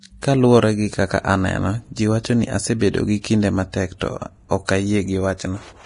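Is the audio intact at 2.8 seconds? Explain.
No. A pre-echo sits at 2.79 s, just before "gi kinde". A burst of hiss about 19 ms long comes before the attack. The codec spreads its quantisation noise across the whole block, so the quiet moment before the onset gets filled, and the attack sounds smeared.

The speech is also hissy and grainy here, with nothing above 10.6 kHz. That is likely heavy Vorbis compression, and it fits a low bitrate of about 32 kbps. Coarse treble quantisation turns fine detail into noise and roughens the tone.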